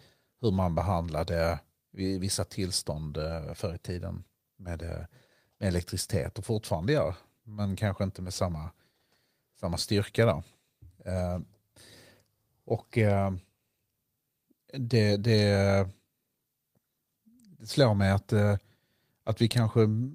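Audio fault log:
No faults detected in the speech recording.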